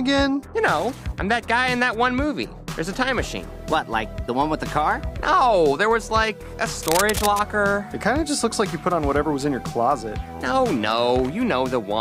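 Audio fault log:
6.83–7.40 s, cable scratch noise: for just over half a second a dense, ragged scratching and rustling sits over the sound, only a little quieter than it. The likely cause is a worn cable, connector or control being moved, so its contact resistance jumps about and injects irregular noise bursts. It differs from digital clicks or dropouts, which are sharp isolated ticks or gaps, because this is a continuous, uneven crackle lasting the whole movement.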